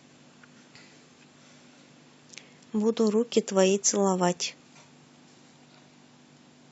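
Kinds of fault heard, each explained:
No technical faults can be heard in the speech recording.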